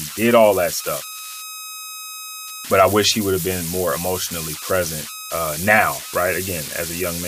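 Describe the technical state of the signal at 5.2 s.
At 5.2 s the speech carries converter idle tones, present throughout the clip. The delta-sigma converter, undithered, settles into repeating bit patterns on small inputs. These produce a tone near 1.5 kHz in pauses and grainy noise under quiet speech, about 10 dB below the signal.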